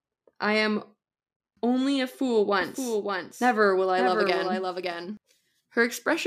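Speech, and from 2.61 s to 5.17 s, right after "only a fool", a second copy of the audio runs underneath the first, trailing by about half a second and sitting roughly 5 dB quieter. This doubled audio track is full-band and perfectly dry, with no reverb tail, and it cuts in and out abruptly at both edges. The likely cause is the signal being captured a second time through a slower path, or an edit leaving two out-of-step copies stacked.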